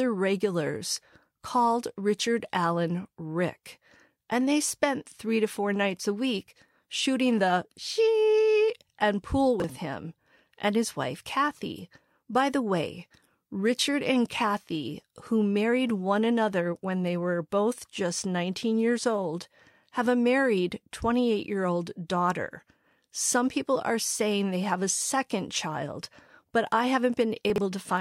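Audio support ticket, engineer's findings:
Brief jumbled stutter at 9.6–9.64 s, between "the she and pool" and "him and his wife". Chunks out of order: one slice plays one slot late, fits 20 ms chunks. Likely jitter buffer or writer reordering, three hard joins.

Longer garbled smear at 27.5–27.58 s. Chunks out of order again: a 20 ms slice lands about three slots late. Same component suspected, nothing lost, only sequence broken.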